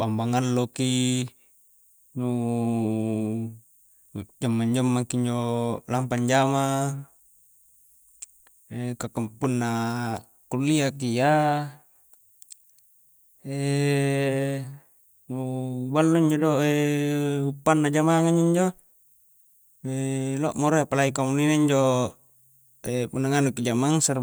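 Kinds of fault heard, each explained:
Loud pop: A brief voltage pulse, likely from a plug, switch, static discharge or driver glitch, entered the signal path, so a single sharp pop lasting about 20 ms sits at 9.44 s, roughly 10 dB above the speech, which carries on underneath.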